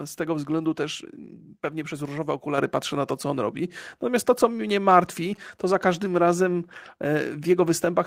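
At 2.58 s, between "też pewnie przez różowe" and "patrzę na to co", the speech and the background jump up together by about 6 dB in a single step. This is a microphone volume stepped up: the call software judged the input too quiet and raised the device's gain all at once, mid-speech.

From 5.12 to 6.08 s, just after "to co mnie", a galloping dit-dit-dit of short 217 Hz buzzes sits well below the speech. These are GSM signalling bursts: a nearby 2G phone sending brief radio bursts while signalling, which the audio circuitry rectifies into audible sound.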